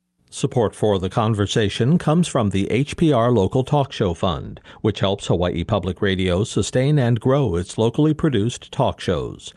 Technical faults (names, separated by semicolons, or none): channel delay (comb filtering)